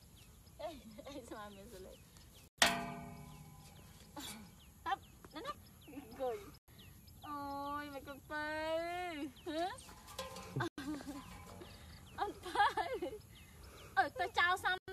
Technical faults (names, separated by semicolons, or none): gap between chunks